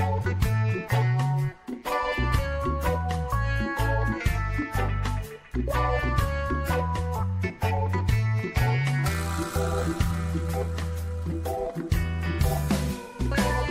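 Listening closely, nothing in the audio stood out as a technical problem at any point.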